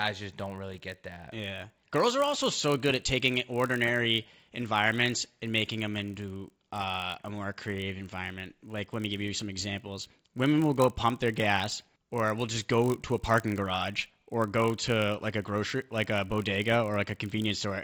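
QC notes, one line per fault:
Throughout: resampler restarted on every block. A steady 50 Hz buzz rides on the speech and drops away in the pauses. Each 20 ms block was converted without its neighbours' samples, so the filter saw silence or the block's opposite end at every edge, leaving a small error there. Those edge errors repeat at the block rate and fuse into a buzz. The upsampling involved fits a 16 kHz to 48 kHz conversion.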